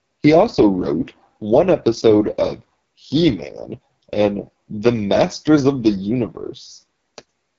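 Throughout, the speech sounds rough and raspy with nothing above about 7.1 kHz: AMR wideband (HD Voice) codec damage, consistent with its lowest 6.6 kbit/s rate.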